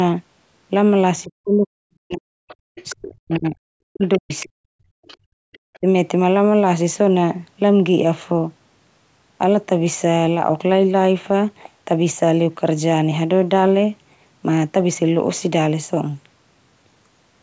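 At 1.18 to 1.22 s you get a faint scrap of the other side's voice leaking through, about 35 dB under the speech. It's likely loudspeaker echo the canceller missed.

From 1.24 to 4.63 s the speech is suppressed in double talk. The talker dips by as much as about 40 dB, adding up to roughly two seconds of loss, likely because the canceller turned down both voices together.

Overlapping that, from 2.48 to 5.78 s, the far end leaks through much more strongly, only about 20 dB below the speech, again likely residual echo.

The background is gated by the echo canceller at 2.63 to 2.67 s and again at 4.91 to 5.5 s. It clamps the mic while the loudspeaker plays, so the room sound drops by about 36 to 37 dB, then comes back when it lets go.

At 5.78 to 5.86 s there's one more short speech dip of about 30 dB, likely the same double-talk suppression.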